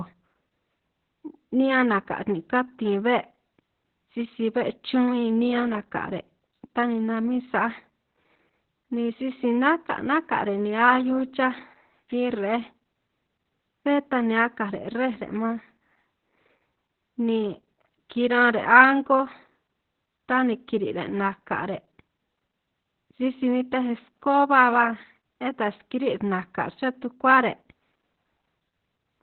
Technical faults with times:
0.00-29.23 Opus voice compression

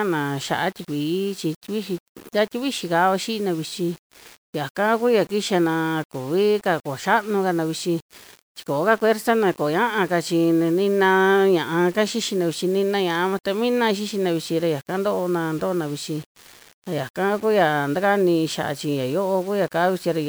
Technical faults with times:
0.00-20.28 low bit depth without dither

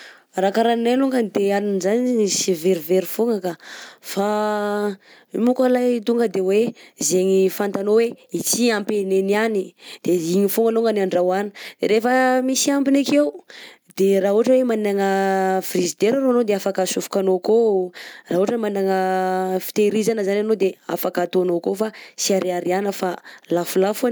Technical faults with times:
none

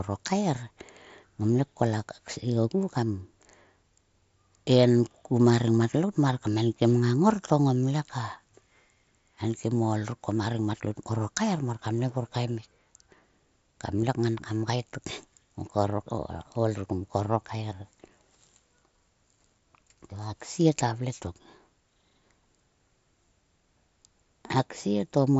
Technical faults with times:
14.02 concealed Bluetooth headset packet loss

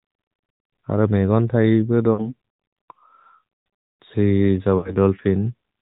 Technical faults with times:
0.00-5.82 AMR narrowband mobile codec
2.14-2.34 lost AMR speech frames
4.78-4.97 lost AMR speech frames

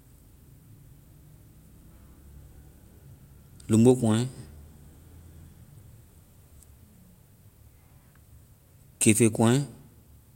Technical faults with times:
none

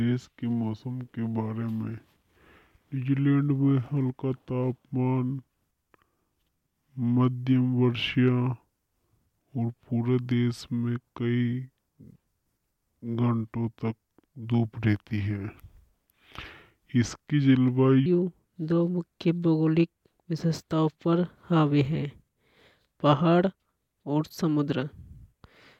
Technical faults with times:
0.00-18.06 section at the wrong speed

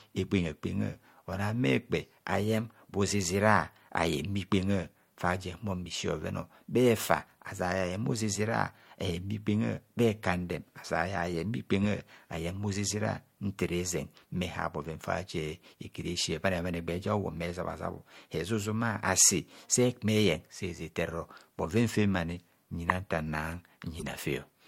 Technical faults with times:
11.83 corrupt frame decoded
22.89 corrupt frame decoded
23.99-24.07 corrupt frame decoded

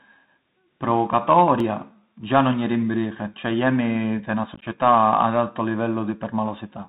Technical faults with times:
0.00-6.88 Bluetooth CVSD headset codec
1.60 dropped buffer (overrun)
4.54-4.64 unconcealed Bluetooth headset packet loss

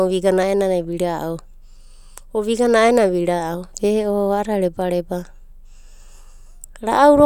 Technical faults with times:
none

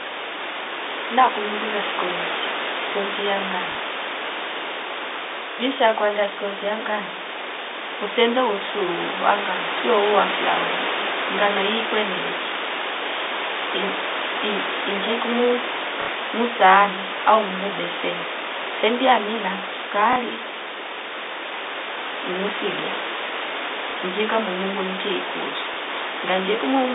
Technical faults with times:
3.72-3.75 packet loss with last packet repeated
5.52-5.58 packet loss with last packet repeated
16.02-16.08 packet loss with last packet repeated
20.13-20.16 packet loss with last packet repeated
23.91-23.94 packet loss with last packet repeated
25.74-25.77 packet loss with last packet repeated

